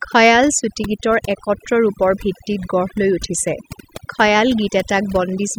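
From start to finish, the gaps between phrases fall to near silence scattered with twinkling specks. This is overdone noise removal: a noise reduction stage set far too aggressively pulls individual frequency bands down or out entirely whenever their level sits close to its noise estimate. Because quieter parts of the speech fall in that range too, they are stripped along with the noise.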